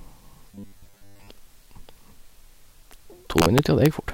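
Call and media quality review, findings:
Robotic sound from repeated short buffers, 0.52 to 1.30 s. Rigid metallic buzz at 100 Hz over the speech. Likely cause: jitter buffer underrun. A 10 ms block replays to fill gaps, so most real audio there is skipped.

Integer overflow, 3.38 to 3.86 s. Violent cracks on loud speech peaks. Gain stage or mixer sum. Peaks exceed the integer limit by about 2 dB and wrap to the opposite sign instead of saturating.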